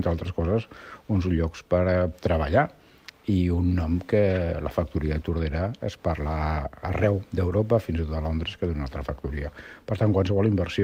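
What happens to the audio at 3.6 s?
Nothing goes wrong at 3.6 s: the audio there plays through intact, with no dropout, click, distortion or other fault at that moment.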